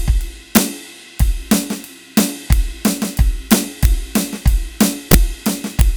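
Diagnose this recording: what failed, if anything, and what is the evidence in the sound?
Integer overflow cracks appear at 0.56, 1.51 and 5.80 s, and across longer loud passages at 2.17–2.53, 3.52–3.85 and 4.82–5.14 s. The failure sits in a fixed-point gain or sample-format stage: music peaks pushed about 1 to 4 dB past full scale wrapped to the opposite extreme instead of saturating. Every such peak jumps across the whole range, giving harsh cracks far sharper than clipping, densest in the 4 dB passages.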